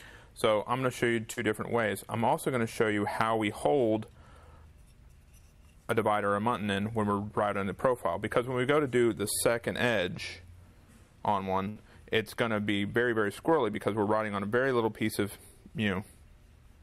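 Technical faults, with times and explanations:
1.33–1.39 s, short concealed packet loss: About 40 ms of audio never arrived in time to be decoded, and the receiver covered roughly 34 ms of it by extending the preceding sound before blending back into real audio. The result is a brief smear or wobble rather than a silence. Unlike a burst loss, the patch is too short to fade or to become an audible held tone, so only a fleeting blur marks it.
11.69–11.77 s, burst of packet loss: Around 60 ms went missing in one run, and the receiver stretched the last sound over about 66 ms, lowering its level as the gap continued. You hear a short held buzz or fading hiss, then the audio picks up further along with that stretch gone. The concealment lasts long enough to decay audibly, which a single short concealed loss does not, and that is what separates it from the event at 1.33 s.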